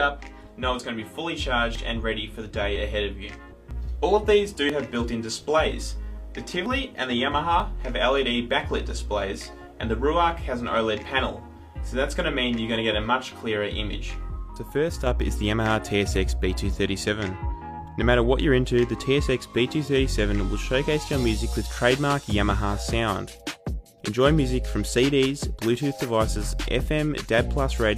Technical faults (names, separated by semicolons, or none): overlap between stream segments